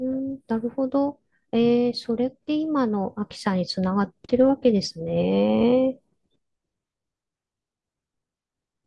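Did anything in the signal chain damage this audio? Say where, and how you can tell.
No, nothing in this speech recording points to damage at any stage of the signal chain. There is no moment where the sound shifts in a way that would mark a problem introduced along the way.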